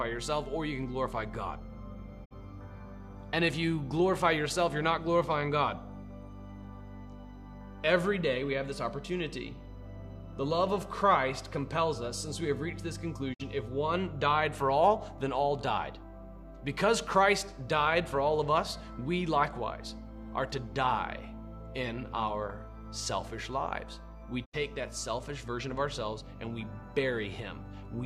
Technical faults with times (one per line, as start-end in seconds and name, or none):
2.24-2.33 digital broadcast dropout
13.33-13.41 digital broadcast dropout
24.44-24.55 digital broadcast dropout